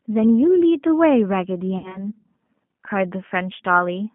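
From the start, the speech carries G.729 codec damage that is plainly audible. Its rough, slightly synthetic texture fits the 8 kbit/s G.729A coder, which rebuilds the speech from a vocal tract filter, a pitch predictor and a handful of pulses per subframe rather than from the waveform itself. The line band runs from about 150 Hz to 3.4 kHz, so nothing above that reaches the listener and the sound is narrow and telephone-like.

From 1.78 s to 2.09 s there is VoIP packet loss concealed by the speech codec. About 60 ms of audio went missing, which fits three lost 20 ms packets. The decoder filled the gap by repeating its last pitch period and filter shape at falling gain, so the speech smears into a buzzy tone or a coloured noise that fades. Because each frame is built on the previous one, the sound stays weak or distorted after audio resumes, until about 2.09 s.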